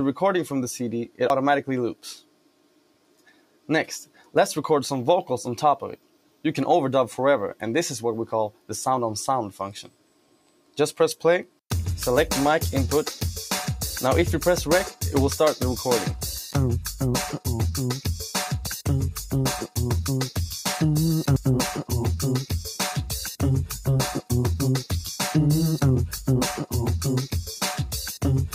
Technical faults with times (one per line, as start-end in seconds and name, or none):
0.00-28.55 noise suppressor applied to music or sounds
1.30 dropped buffer (overrun)
2.20-3.69 sound cut by the noise suppressor
4.06-4.35 sound cut by the noise suppressor
5.97-6.45 sound cut by the noise suppressor
8.52-8.70 sound cut by the noise suppressor
9.83-10.77 sound cut by the noise suppressor
18.67 dropped buffer (overrun)
21.36 dropped buffer (overrun)